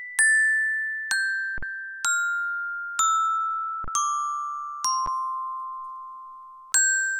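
Three spots where there's an underrun with held sample: 1.58 to 1.63 s (about 46 ms, which fits a 2048-sample buffer), 3.84 to 3.88 s (about 35 ms), and a quick one at 5.06 s (about 12 ms, fitting a 512-sample buffer). Each time the converter just holds its last value, so the waveform freezes flat and the sound stops dead with little click. Then playback resumes right where it paused, nothing skipped, so the restart is soft too.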